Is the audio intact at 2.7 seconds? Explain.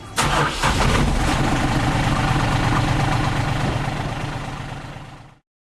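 Yes, the audio is intact at 2.7 s, with no dropout, click, distortion or other fault at that point.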